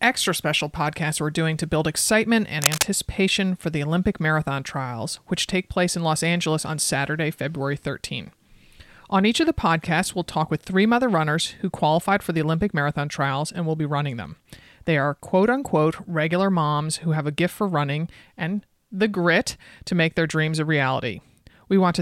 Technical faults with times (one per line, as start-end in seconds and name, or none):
2.62-2.85 cable scratch noise